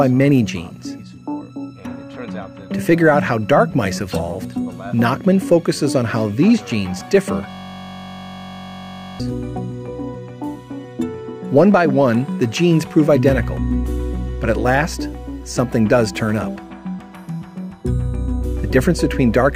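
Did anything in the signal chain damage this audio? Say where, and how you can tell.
Yes. A system hang loop at the driver and buffer stage runs from 7.50 to 9.20 s. The host stalled while the audio hardware kept replaying the same ring buffer, so one 21.33 ms slice repeats 79 times. That short loop sounds like a steady buzz at 46.9 Hz, which fits a 1024-sample buffer. A waveform shows an identical block tiling across that span, and a spectrogram shows evenly spaced horizontal harmonic lines at multiples of 46.9 Hz.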